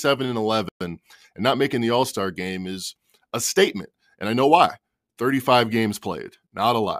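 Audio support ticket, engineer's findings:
Playback stall, 0.69–0.81 s, 120 ms of silence just before "and not making the". Speech halts mid-flow, then resumes. Likely player buffer underrun or a blocked audio thread.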